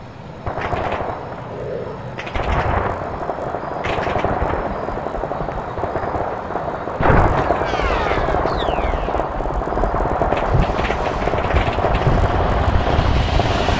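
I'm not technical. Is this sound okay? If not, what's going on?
No. All the way through, a steady buzz rides along with the sound, about 50 small ticks every second, and it only appears while something is playing. This is a resampler restarted on every block. The audio was converted to a different sample rate in short chunks of 20 milliseconds, each handled as if it stood alone, so every chunk boundary picks up a tiny error, and those regular glitches blur into a buzz.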